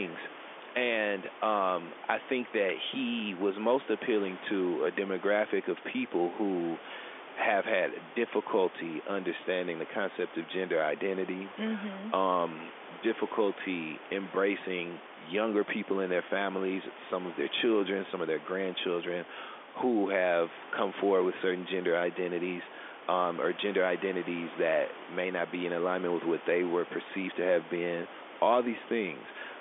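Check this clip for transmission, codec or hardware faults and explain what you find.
No faults detected.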